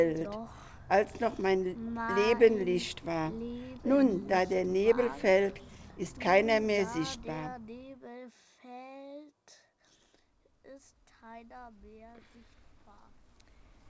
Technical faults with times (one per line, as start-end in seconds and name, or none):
none